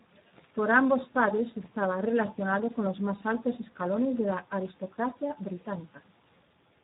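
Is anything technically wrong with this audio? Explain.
Yes, the whole clip has been through the Speex codec. It's starved of excitation bits, which fits roughly 8 kbps, so the speech sounds hoarse and noisy, with nothing above 3.8 kHz.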